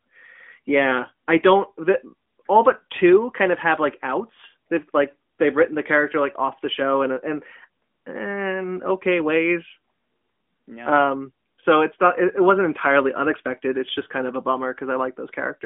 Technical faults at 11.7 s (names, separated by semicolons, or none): none